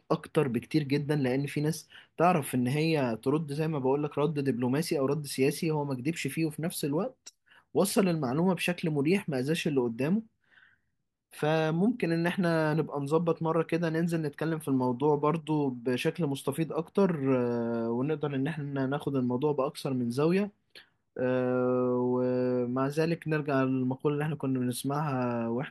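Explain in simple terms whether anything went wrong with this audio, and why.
Nothing went wrong here: the recording comes through with no dropouts, glitches, distortion or other technical faults anywhere in it.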